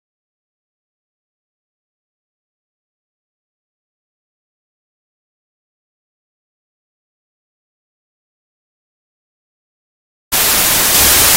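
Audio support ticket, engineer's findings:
Wrong sample width, entire clip: loud broadband noise with the original sound buried beneath it, running slow at 0.667x speed with pitch lowered to match. Points to packed 24-bit data read as 16-bit, splitting samples across mismatched byte boundaries.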